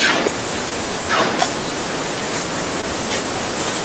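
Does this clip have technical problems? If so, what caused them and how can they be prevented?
Yes: short concealed packet loss at 0.69 to 0.73 s and 2.81 to 2.85 s, where about 20 ms of audio went missing and the receiver extrapolated the preceding sound instead of leaving silence, giving a brief smear rather than a hard gap or click. Reducing network jitter and loss, for example with a wired connection or a larger jitter buffer, prevents it.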